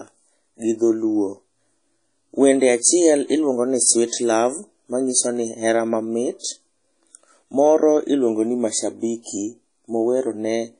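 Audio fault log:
Throughout, WMA compression: the speech sounds ringing and washy, with a hiss that rises and falls with the level, and nothing remains above 10.1 kHz. This is likely a transform codec at a low bitrate, one that fits roughly 32 kbps, with long blocks smearing quantisation noise over tens of milliseconds and zeroing weak components. A spectrogram shows a hard ceiling at 10.1 kHz, patchy gaps between the stronger bands, and haze around onsets.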